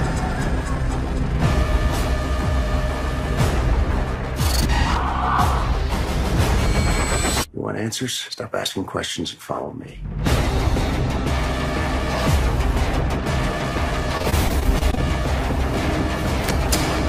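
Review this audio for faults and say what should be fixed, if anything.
Repeated packet loss (robotic sound) occurs from 14.17 to 14.99 s: a rapid run of short dropouts, the longest about 25 ms, each patched by extending the preceding audio, leaving roughly a fifth of that stretch concealed and choppy. Preventing it requires a larger jitter buffer and forward error correction on the network path.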